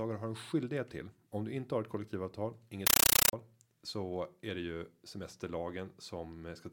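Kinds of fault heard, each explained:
Compressed stream played as audio: Right after "inte har ett kollektivavtal", from 2.87 to 3.33 s, the speech is replaced by harsh, very loud chattering static that pulses about 31 times a second, each burst roughly 9.3 ms long with silence between. The bursts are encoded data, consistent with a Dolby Digital (AC-3) stream at around 448 kbps, passed straight to the output as if it were ordinary samples instead of being decoded.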